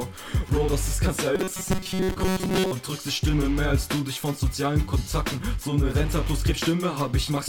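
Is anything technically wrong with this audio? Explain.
Yes. There is robotic sound from repeated short buffers from 1.35 to 2.72 s, most likely because new audio arrived too slowly and playback kept reusing the last short fragment instead of the missing material. Most of that stretch is repeats, which impose a fixed 188 Hz buzz, fitting a fragment about 5.3 ms long. The sound turns rigid and metallic, following the original only loosely until it recovers.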